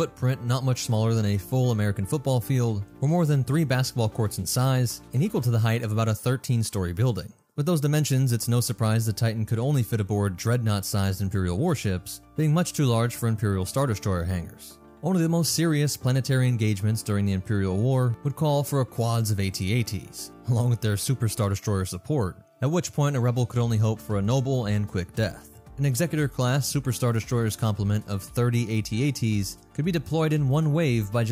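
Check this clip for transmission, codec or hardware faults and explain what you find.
No transmission, codec or hardware faults are audible anywhere in the clip, and the signal holds steady throughout without any dropouts, glitches or interruptions.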